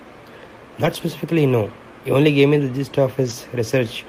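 A speech clip with lost packets rebuilt from error correction: low-bitrate backup copies filled the gaps at 0.85–0.95 s and 3.25–3.31 s, so nothing drops out, but those stretches sound briefly rougher and noisier.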